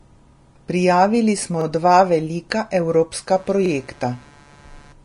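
All the way through, the speech has a grainy, hissy treble, and nothing comes through above about 10.5 kHz. That's plainly audible codec damage, most likely from Vorbis compression at a low quality setting, which fits a bitrate around 33 kbps: the coarsely quantised high end turns into noise.

At 1.61 s there's a quick stutter where 44 ms of audio plays twice. That's overlapping chunks: each new chunk starts before the previous one ended, so the seam gets doubled.

From 3.29 s to the end, computer activity noise comes in as a buzz pulsing at roughly 150 Hz, around 30 dB below the speech. Processor or other hardware load is disturbing the audio ground, so the buzz follows the machine rather than the voice.

Inside that stretch, at 3.66 s, the same 44 ms overlap stutter happens again, about 2 s after the first, which fits 2-second chunks.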